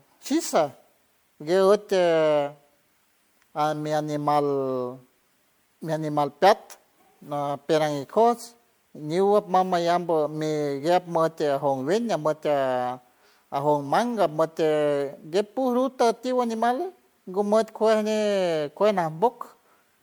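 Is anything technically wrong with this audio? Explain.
Yes. Throughout the speech there is generation loss: a swirly, smeared, hollow quality with blurred attacks, likely from around four successive MP3 passes at what sounds like 96 kbit/s. Each re-encode quantises on a shifted frame grid, so its errors stack. Bandwidth still reaches about 20.1 kHz, so this is compounded damage rather than one starved encode.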